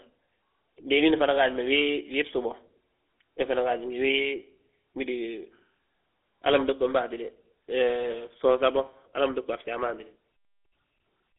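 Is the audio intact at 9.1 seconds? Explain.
No. At 9.1 s the speech is going through the GSM full-rate codec, which affects the whole clip. That codec models the vocal tract and excites it with a sparse, regularly spaced pulse train, so the voice comes out buzzy and gravelly, and the damage is plainly audible here. The band is squeezed to roughly 300 Hz–3.6 kHz with nothing above 3.8 kHz, which fits the old 13 kbps GSM rate.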